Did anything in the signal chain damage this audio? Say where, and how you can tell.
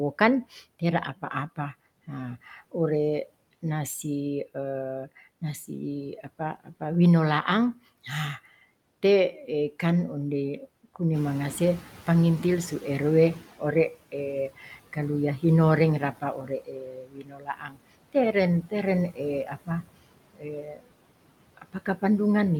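Yes. The damage comes from call processing, specifically the noise suppressor. Noise suppressor artifacts run through the whole clip. The background is pulled down by about 18 dB, and it sinks in the gaps and comes back up under the speech. The suppressor applies gain per frequency band, frame by frame, wherever it judges the content to be steady noise.

Speech cut by the noise suppressor appears at 0.19–2.74 s, 6.23–6.81 s, 13.59–15.43 s, 16.0–20.89 s and 21.57–22.03 s. In each span, parts of the speech sound swallowed or faint, with drops of about 10 to 19 dB. The deepest and longest loss is at 16.0–20.89 s, where roughly two seconds of material is turned down. The suppressor misread low-level speech energy as noise and attenuated it along with the background.

The noise suppressor catching up shows at 11.13–13.59 s. The room noise, a genuine part of the recording, rises by about 11 dB at around 11 s. 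For the next 2.46 s that noise comes through less reduced, then settles to a cut of about 12 dB as the noise estimate re-adapts. The lag is inherent in how the suppressor updates its noise estimate, which trails a sudden change in the noise floor.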